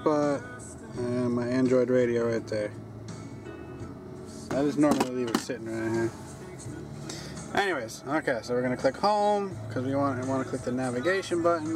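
From 4.47 to 4.53 s, a short irregular burst of scratchy crackle marks loose connector crackle: a worn contact briefly making and breaking, chopping the signal.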